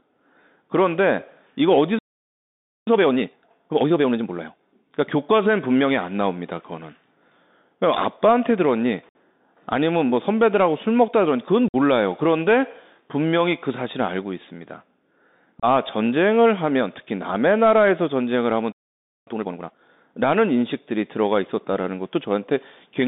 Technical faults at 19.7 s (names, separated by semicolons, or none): Bluetooth CVSD headset codec; time-compressed catch-up